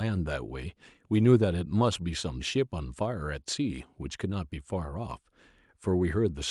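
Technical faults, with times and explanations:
No technical faults can be heard in this speech recording.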